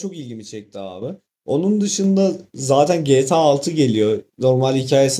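At 1.02 s the microphone volume steps up by about 8 dB, and at 2.04 s by another 4 dB or so. The call software raised the input gain in single jumps. Speech and background noise both get abruptly louder together.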